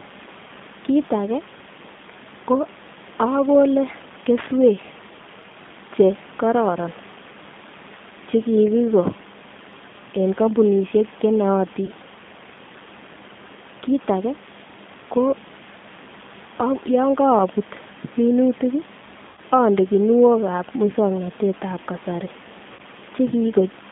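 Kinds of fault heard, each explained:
G.729 codec, throughout: the speech is rebuilt from a vocal tract filter, a pitch predictor and a few pulses per frame, in a band of roughly 150 Hz to 3.6 kHz, which fits an 8 kbit/s coder. The synthetic roughness is plainly audible.
VoIP packet loss concealed by the speech codec, at 11.86 to 11.91 s, 19.27 to 19.40 s, and 22.73 to 22.81 s just after "muswoknotetab kasari": about 20, 100 and 60 ms of sound went missing. The decoder stretched its last pitch and filter into a fading buzzy tone or coloured noise, and the voice stays weak or distorted for a moment afterward.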